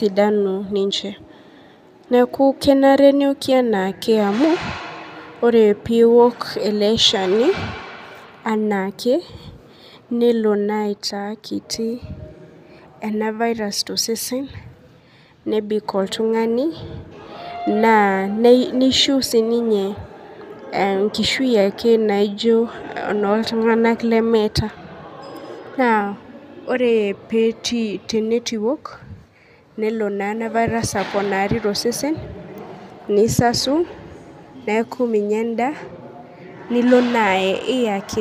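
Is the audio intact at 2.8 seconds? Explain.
Yes, at 2.8 seconds the audio is intact, with no dropout, click, distortion or other technical fault at that moment.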